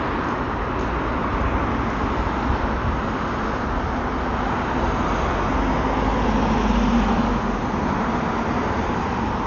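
From start to finish the sound is dull and muffled, with nothing above about 7 kHz, and tonal parts carry a rough, fluttering haze. That's heavy codec damage, likely from Dolby Digital compression at a starved rate, something like 48 kbps. At that budget the encoder narrows the band and leaves many frequency lines without real detail, and the decoder fills those gaps with dither noise, which is the grainy flutter you hear.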